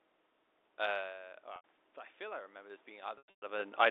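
From 0.85 s to 3.72 s the level creeps upward: automatic gain rising. After the input drops by about 14 dB around 1.0 s, when the talker pulls back from the microphone, the gain control compensates by raising its gain by about 9 dB over nearly three seconds. Voice and room noise swell together. On a waveform the envelope, including the gaps between phrases, widens steadily. On a spectrogram the noise floor brightens across the band along with the speech.

At 1.56 s an 80 ms gap is bridged by packet loss with pitch repetition. The receiver loops the last pitch period, so a short buzzy, held tone replaces the sound until 1.64 s. A spectrogram shows flat, evenly spaced harmonic stripes with no formant movement, and a waveform shows identical repeating cycles. The length points to four lost 20 ms packets.

From 3.18 s to 3.42 s a second, heavier burst of packet loss with pitch repetition drops about 220 ms of audio across a 240 ms span. 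The longest unbroken run is 120 ms. The looped pitch period fades toward silence before the audio cross-fades back, giving a choppy, buzzing stutter. On a spectrogram this shows as repeated frozen harmonic bands fading into dark gaps. On a waveform it shows as decaying copies of one cycle with near-flat stretches between them.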